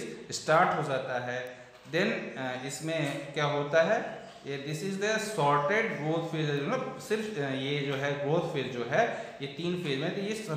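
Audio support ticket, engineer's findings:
Two isolated sharp ticks, broadband, no relation to surrounding sound. First at 1.47 s, peak about -24 dBFS. Second at 6.57 s, quieter, about -30 dBFS. Each a single-sample excursion. Bit error spike: one flipped bit in memory or on the digital link, so the sample value jumps by a power of two and snaps back. Probable component: buffer RAM or serial audio interface. Check link integrity and error counters.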